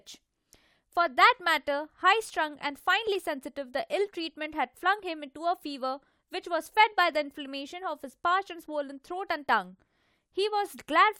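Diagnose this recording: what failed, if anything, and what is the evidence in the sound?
Nothing stood out on listening to this speech recording that would point to a failure at any stage of the chain.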